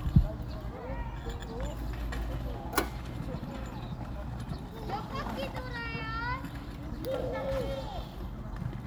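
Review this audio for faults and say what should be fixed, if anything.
Nothing in these everyday sounds needs fixing, as no technical fault can be heard anywhere in the recording. There is nothing to correct and no preventive step to suggest.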